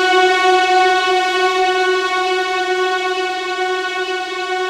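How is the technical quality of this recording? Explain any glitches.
No technical faults are audible.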